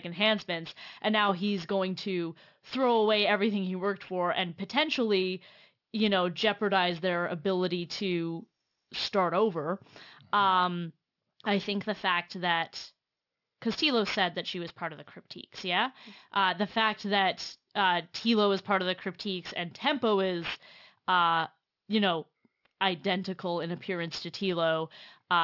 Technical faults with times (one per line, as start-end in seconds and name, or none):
0.00-25.44 aliasing